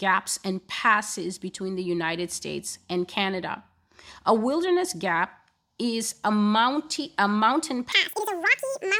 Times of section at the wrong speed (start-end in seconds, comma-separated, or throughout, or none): 7.92-8.99